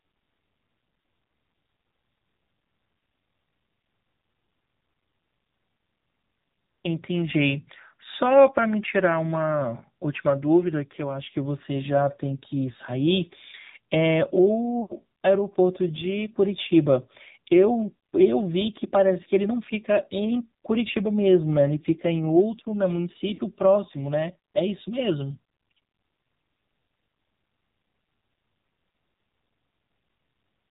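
Throughout, the AMR narrowband mobile codec leaves buzzy, synthetic speech with nothing above 4 kHz. A spectrogram shows a hard ceiling there, which fits the codec's 8 kHz sampling; the bitrate is a low 7.4 kbps.

Lost AMR speech frames occur at 14.82–14.93 s, 20.92–20.95 s, 23.34–23.41 s and 28.58–28.60 s. Each is a brief drawn-out warble or dip. The longest, about 80 ms, fits four lost frames. These show as smeared, fading spectral patches.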